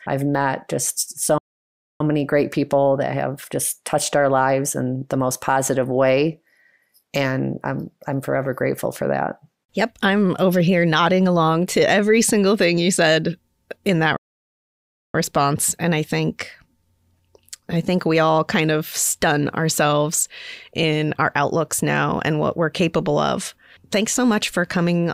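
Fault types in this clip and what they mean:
Playback stall: the speech cuts out mid-flow at 1.38 s for about 0.62 s and at 14.17 s for nearly 1 s, likely because the player ran short of data; both show as flat-line gaps in the waveform and blank vertical bands on a spectrogram.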